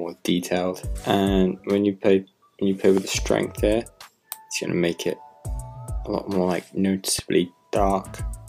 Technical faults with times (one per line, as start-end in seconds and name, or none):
2.97-3.21 loud pop
7.19-7.21 loud pop